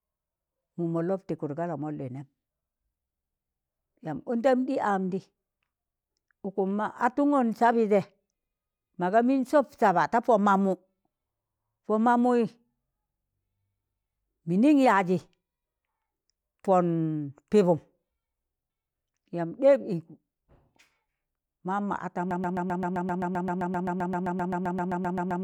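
From 22.31 s to the end, the speech falls into a broken-record loop. One 130 ms fragment repeats exactly, 24 times, as a rapid stutter. A stalled player or stream likely resent its last buffer, so the audio that followed is lost. The waveform and spectrogram show identical blocks tiled back to back.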